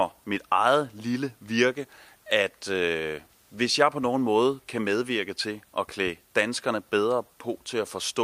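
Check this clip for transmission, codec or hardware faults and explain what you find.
Nothing in the clip points to a fault. There is nothing to report from any part of the signal chain.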